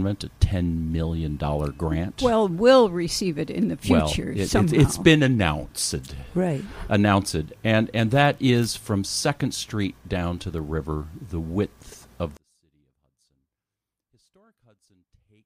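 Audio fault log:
12.37–15.46 s, one channel inverted: the sound drops by about 38 dB to a faint copy to the end, with centred content nearly gone. This is likely one stereo channel with reversed polarity, so the material common to both channels cancels when summed.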